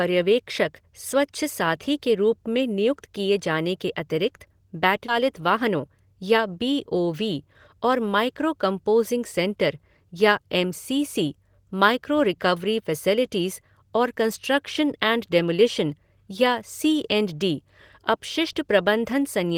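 At 5.08 s there is a skip ahead. About a third of a second of speech was dropped, and playback jumps straight forward with no gap. From 5.19 to 6.47 s comes a jitter buffer speed-up. Short pitch-period slices were trimmed to cut excess delay, so the speech runs about 5% fast at unchanged pitch before "बी ओ वी और".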